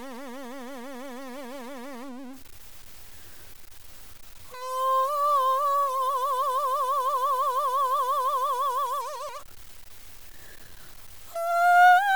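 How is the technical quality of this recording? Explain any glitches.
The recording has two technical problems. One runs the whole way through, and one is a brief dropout near the end.

A distortion sits on the music from start to finish. It rides along with the waveform and gives the tone a grainy or buzzy edge. Quiet passages are not clean either. They carry a layer of noise. The likely cause is a stuck bit, where one data bit is pinned at 0 or 1 by a broken line or converter. About half the samples then come out wrong by that bit's weight.

At 9.28 s there is a tiny gap of about 7.5 ms, which fits a single lost frame. This is lost LE Audio frames. The Bluetooth LE Audio link dropped the data, so the LC3 decoder filled the hole by reusing the last spectrum with random signs. Because the gap is so short, no fade sets in. The result is a momentary noisy smear where the tone briefly loses its pitch.

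Light lossy compression is also present, at a level that stays faint.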